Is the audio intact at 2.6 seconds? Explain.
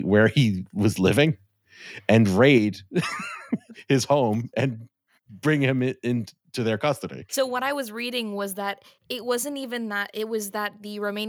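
No. At 2.58 s the microphone volume stepped down, most likely because the call software judged the input too hot and cut the device's gain in a single step. The speech and background both drop abruptly by about 5 dB and stay quieter.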